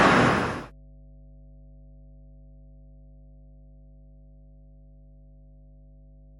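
A steady mains hum at 50 Hz enters at 0.46 s and continues to the end of the audio, sitting roughly 30 dB below the signal. The constant low tone with low harmonics indicates power-line coupling, typically a ground loop or a nearby transformer.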